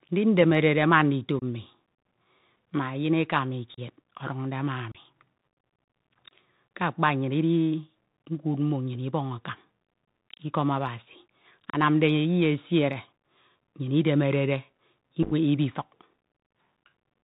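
Bluetooth CVSD headset codec, throughout: the speech is carried as single up-or-down bits at 64 kHz with an adapting step, so nothing above 4 kHz survives. Sibilants turn scratchy, loud bright sounds overshoot into distortion, and a grainy hiss sits under everything.

Unconcealed Bluetooth headset packet loss, at 1.39 to 1.43 s, 3.74 to 3.79 s, 4.92 to 4.96 s and 11.70 to 11.76 s: around 26 to 34 ms of audio vanished each time, leaving abrupt holes with a brief quieter recovery. At 15.23 to 15.33 s, about 49 ms dropped in short runs of at most 7.5 ms, producing a rough, crackly chop.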